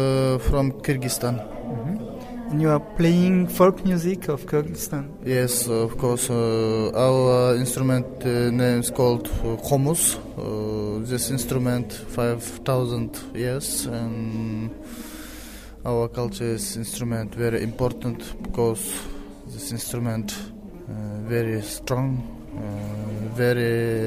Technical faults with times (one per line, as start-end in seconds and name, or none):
none